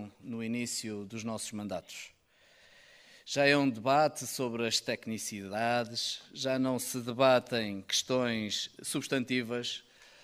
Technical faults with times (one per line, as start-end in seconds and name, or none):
none